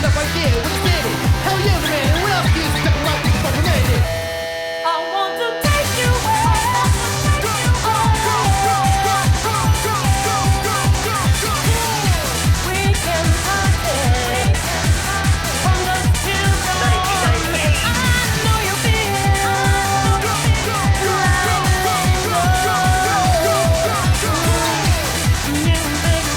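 No technical faults are audible.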